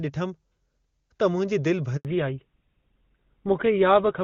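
A speech recording in which the call suffers a handover gap from 1.97 to 2.05 s: the voice dies away quickly and clean silence fills the rest of the 80 ms gap before the new link takes over. Unlike an ordinary dropout or packet loss, nothing fills the hole, and the sound that resumes comes back through a different channel. From 2.05 s to the end there is a fallback to narrowband. Everything above 4 kHz disappears, and the speech turns duller and rougher than the clear wideband opening, which fits HD Voice at its top rate of 23.85 kbit/s, against a later sound that fits GSM full rate at 13 kbit/s. A badly placed microphone or a steady filter would dull the whole clip evenly. Here the bandwidth collapses at the exact moment of the gap and stays narrow afterwards.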